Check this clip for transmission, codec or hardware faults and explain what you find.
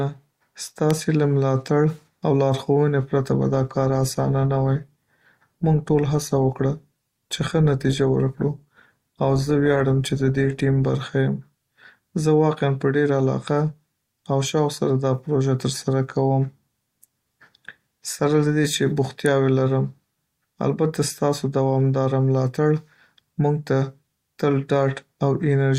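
Yes, there are two kinds of fault in this speech clip: a couple of sharp electrical snaps and an eight-second stretch where the stream quality steps down.

The snaps land at about 0.91 s and again at 19.26 s, each one just a single instant long. They're an electrical switching spike, most likely a nearby switch, motor or static discharge arcing briefly and the audio line picking it up. You hear a tight, dry snap sitting on top of the voice, unrelated to anything being said.

From 2.98 s to 10.98 s you get an adaptive stream at a lower bitrate. The player dropped to a cheaper version of the stream when the connection slowed, which fits a switch from Opus at 64 kbit/s down to around 24 kbit/s. The speech keeps flowing with no gap, but codec artefacts creep in. The change is abrupt at both ends, snapping back to full quality at 10.98 s.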